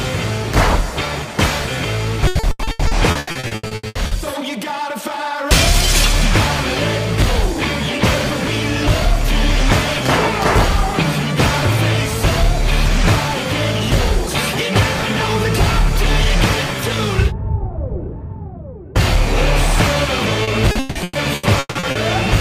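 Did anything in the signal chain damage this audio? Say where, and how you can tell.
Yes, at the network stage. From 2.27 to 4.14 s the sound turns choppy and robotic, with repeated packet loss. A dense run of short holes, none longer than 80 ms, covers about half that stretch. The same happens from 20.43 to 21.98 s, with fewer but longer holes, up to 160 ms, covering about 44 percent. Each lost packet is patched by stretching the previous sound. Back-to-back patches give the robotic, broken texture.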